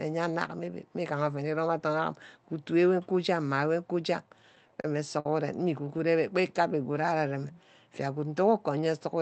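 A speech recording that has passed through a WebRTC call path, with high frequencies cut off at about 8 kHz, consistent with Opus at around 32 kbps. Between 4.29 and 5.26 s the speech catches and drags in six short hitches, each a brief hold on the last sound, the longest about 54 ms. These are repeated stalls (stutter): packets arrived late, the jitter buffer kept emptying, and the receiver stretched what it already had to cover about 118 ms in total, roughly 12% of that stretch, without losing any speech. From 6.20 to 7.64 s the speech runs slower at an unchanged pitch, with drawn-out sounds, playing at about 92% speed. This is a jitter buffer slow-down: to build up a reserve, the receiver repeated single pitch periods and fragments of pauses, adding about 123 ms.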